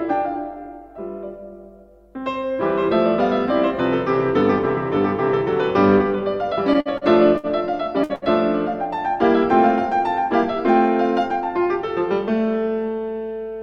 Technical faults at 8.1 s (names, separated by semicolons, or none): burst of packet loss